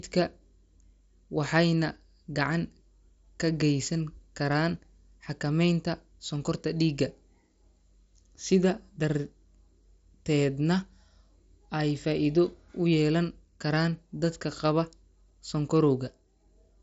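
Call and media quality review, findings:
No faults found in the speech; the path is a Bluetooth mSBC headset codec link at about 61 kbps, band-limited to 8 kHz with the light grain expected of that codec.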